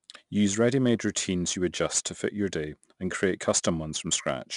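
4-bit ADPCM compression runs throughout the speech. Each sample is coded as a coarse 4-bit step from a prediction, leaving a gritty hiss that rises with every louder syllable. The step size lags on sharp onsets, adding distortion there. Nothing sounds above 10.6 kHz, which fits a stream near 89 kbps.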